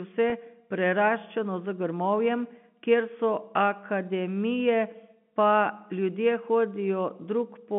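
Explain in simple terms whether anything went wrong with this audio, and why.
At 0.30 s, just before "preraščeno z grmovjem kjer", there is a brief packet loss with pitch repetition. About 20 ms of audio, roughly one packet's worth, never arrived, and the receiver filled the hole by repeating the last cycle of the voice. Instead of a gap or click, you hear a tiny held buzz. That buzz tells it apart from a plain dropout, which would leave a moment of silence. The narrow telephone sound of the line is ordinary phone coding.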